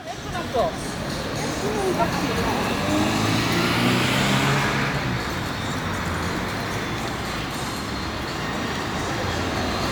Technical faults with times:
none

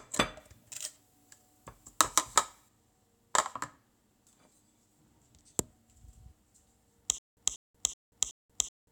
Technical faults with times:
0.40-2.69 pre-emphasis left on
7.18-8.91 stutter with silent gaps

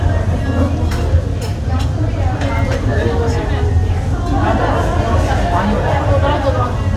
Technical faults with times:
2.59 bit error spike

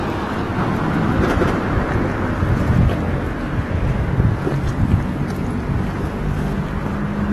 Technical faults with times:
0.00-7.33 AAC compression
0.58-2.78 doubled audio track

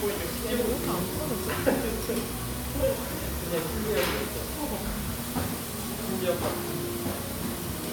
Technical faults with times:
none

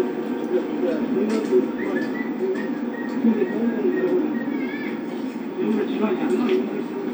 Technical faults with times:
none

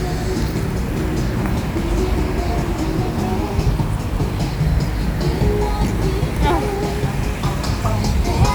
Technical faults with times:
0.00-8.55 low bit depth without dither

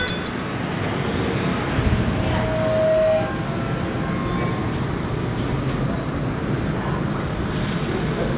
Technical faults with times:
0.08-0.28 sound dropped by the voice detector
1.79-3.47 loudspeaker feedback squeal

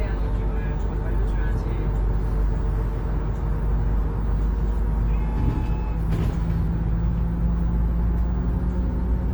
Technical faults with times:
0.00-9.34 Opus compression

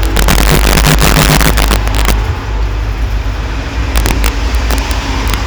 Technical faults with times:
0.00-5.46 integer overflow

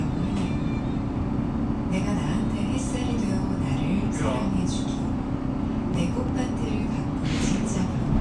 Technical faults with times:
none

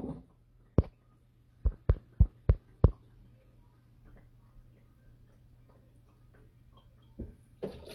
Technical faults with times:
0.00-4.00 adaptive stream starting at a low bitrate

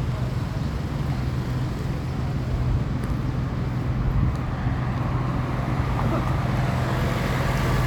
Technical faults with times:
none

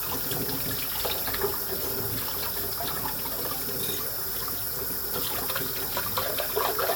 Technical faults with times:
none

